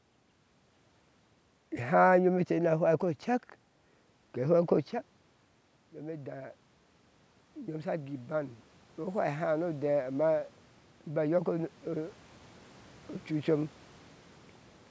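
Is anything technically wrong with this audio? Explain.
Yes. From 7.53 to 10.41 s there is automatic gain rising. The input dropped about 14 dB, so the gain control raised its level by about 7 dB over nearly three seconds. Voice and room noise swell up together. The band stops at 8 kHz, as the call microphone processing allows.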